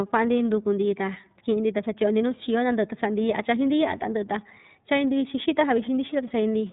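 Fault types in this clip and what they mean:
iLBC codec: a narrowband speech codec that encodes each frame's excitation independently of the frame before it. Here the resulting roughness and slightly synthetic edge on the speech are plainly audible throughout. It uses 30 ms frames, which fits iLBC's 13.33 kbps mode. On a spectrogram all energy stops flat at 3.8 kHz with empty space above, and the waveform keeps its overall shape but loses fine high-frequency detail.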